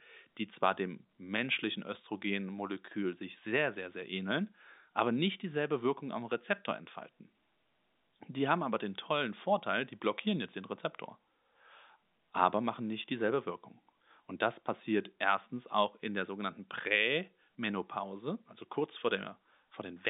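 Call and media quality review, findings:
Nothing stood out on listening to the speech as carried over the G.711 telephone line.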